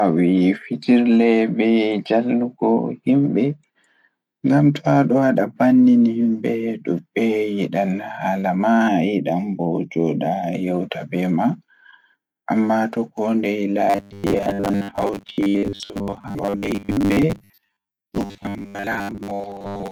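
From 8.88 to 10.55 s the speech turns hollow and phasey, with a fixed notch around 1.5 kHz. This is channel delay (comb filtering): one channel lags by under half a millisecond, so summing to mono cancels evenly spaced frequencies.

From 13.90 s to the end, the speech becomes a rigid, metallic buzz at 100 Hz that only loosely tracks the syllables. The likely cause is robotic sound from repeated short buffers: roughly 10 ms chunks replayed while most of the real audio is skipped.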